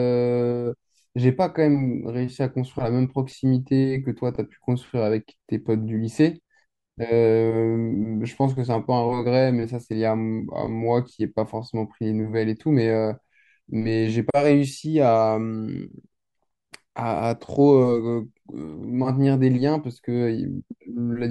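No technical faults can be heard anywhere in the recording; the speech signal stays continuous and intact throughout.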